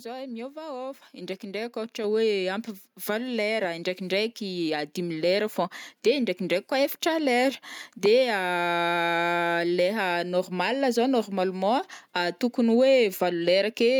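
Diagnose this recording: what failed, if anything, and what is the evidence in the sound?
Call processing's automatic gain control raised the microphone input volume twice: the microphone volume stepped up by about 5 dB at 1.02 s and about 4 dB at 2.04 s, lifting speech and background together.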